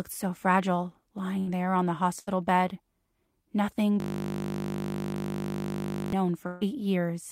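Burst of packet loss at 1.39 s and 2.19 s: roughly 80 ms of speech goes missing each time, and the receiver stretches the last sound and fades it out before resuming.

System hang loop from 4.00 to 6.13 s: a frozen system leaves the hardware replaying one 20 ms piece over a hundred times, producing a steady 50 Hz buzz.

Burst of packet loss again at 6.47 to 6.63 s: a longer gap of about 140 ms is filled with a decaying continuation of the preceding sound.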